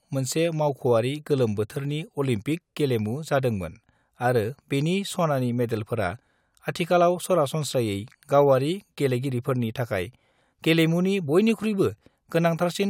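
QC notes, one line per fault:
No faults found in this clip.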